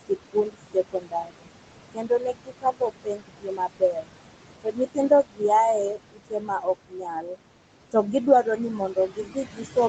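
Speech recorded over steady room noise sitting only about 10 dB under the voice, and you can hear the noise suppressor working hard the whole way through. It's pulling the background down by about 21 dB, so the noise drops away in the gaps and comes back up underneath the talking. Worse, the suppressor is mistaking bits of the speech itself for noise and turning them down with the background, by as much as about 22 dB. That speech cut by the noise suppressor shows up in six stretches: 0.01 to 1.48 s (around a second of it hit), 1.93 to 4.13 s (roughly one and a half seconds), 4.63 to 5.42 s, 5.92 to 6.67 s, 6.88 to 7.38 s (a few tenths of a second each), and from 8.78 s right to the end, where the dip is about 18 dB. In those spots the quieter parts sound swallowed or faint. Above all that, the audio stops around 8 kHz, which fits the call's microphone processing and the Opus codec bandwidth.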